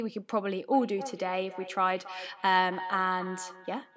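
Feedback echo between two devices runs from 0.68 s to the end: a second device in the room replays this microphone's speech, which gets picked up again, so each phrase returns roughly every third of a second, thinner and ringing, peaking about 13 dB below the speech.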